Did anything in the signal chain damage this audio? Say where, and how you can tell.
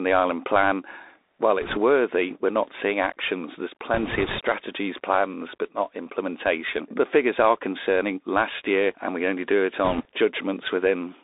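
Yes. At the codec stage, the Bluetooth CVSD headset codec narrows the speech throughout to roughly 250 Hz to 3.7 kHz, which fits a 64 kbps CVSD stream. Its one-bit up/down steps leave plainly audible granular hiss, scratchy sibilants and slope-overload roughness on loud high content.

At the network stage, there are bit errors on the Bluetooth voice link at 1.62–1.78 s before "worthy we're not seeing", 3.94–4.39 s before "plans but not implementation", and 9.85–10.05 s after "we only do it". Each burst brings a rushing crackle without sharp clicks, because flipped bits carry equal small weight and decay, consistent with an error rate of a couple of percent.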